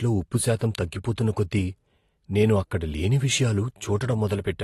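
From start to finish the speech sounds dull and smeared, with nothing above roughly 12.4 kHz and a warbling, fizzy edge on sibilants and held sounds that is plainly audible. This is likely AAC compression, consistent with AAC-LC at a low bitrate, which fits around 32 kbps. Squeezed for bits, the encoder drops the top of the spectrum and quantises the remaining bands coarsely, so fine detail gets blurred and gappy, producing that unstable texture.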